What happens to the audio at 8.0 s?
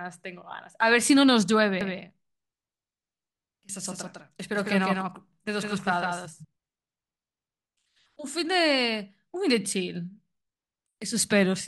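At 8.0 s the speech carries on without interruption, and nothing in the sound at that point shows a fault.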